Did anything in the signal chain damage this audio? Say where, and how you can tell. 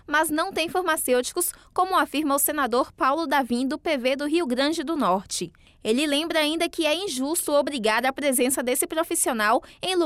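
No, nothing along the way seems to have hurt this one, since I can't pick out any sign of damage from any stage of the chain.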